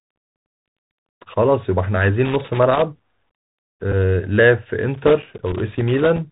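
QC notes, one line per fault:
Throughout, Bluetooth CVSD headset codec: the whole clip has that narrowband headset sound, with nothing getting through above 4 kHz and a grainy hiss sitting under the speech. The codec sends just one up-or-down bit per sample at 64 kHz and adapts its step size, so loud, bright moments move faster than the steps can follow. You hear it as harsh edges and scratchy s sounds, and the damage is plainly audible here.
2.25 to 2.82 s and 4.94 to 6.18 s, loose connector crackle: there are two irregular bursts of scratchy crackle, and the second runs over a second long. This is what a worn or dirty contact does when it shifts. It keeps making and breaking, so the signal is chopped into fragments, and any DC on the line turns each break into a little pop. That gives the uneven, gritty texture rather than a clean dropout.
3.92 to 3.94 s, Bluetooth headset packet repeated: a brief buzzy tick, about 20 ms long, where roughly 7.5 ms of audio went missing, which fits two lost voice packets. 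The headset chip filled the gap by decoding the previous packet's bits again. Each repeat lasts 3.75 ms, so the doubled chunk lands as a short burst of buzz around 267 Hz. The buzz stops as soon as good packets arrive again.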